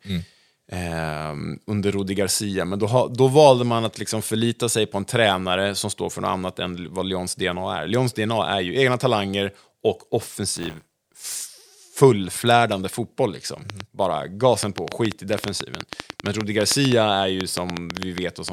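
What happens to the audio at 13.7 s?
A train of clicks starts at 13.7 s and runs to 18.5 s: around thirty similar pulses, about seven per second, irregularly spaced, likely interference or a faulty connection or power supply.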